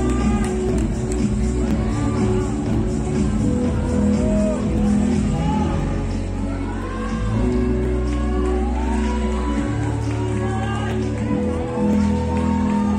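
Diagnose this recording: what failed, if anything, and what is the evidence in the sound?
The failure sits at the driver or buffer stage: periodic USB or driver dropouts. From 0.69 s to 11.93 s a small tick recurs every 1.02 s, about ten times, audible only while there is signal. Each time, something blocks the USB transfer or driver and about a millisecond of audio is skipped, so the waveform jumps abruptly at a splice point. On a spectrogram these appear as thin, evenly spaced vertical broadband lines.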